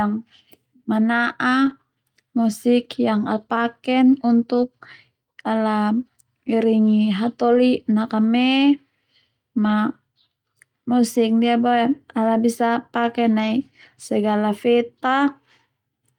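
Lost packets rebuilt from error correction occur at 1.65–1.71, 4.53–4.63, 5.53, 7.47–7.57, 9.65–9.71, 12.33–12.35 and 13.39–13.49 s. No gaps occur. Low-bitrate backup copies fill them, sounding briefly rough and noisy.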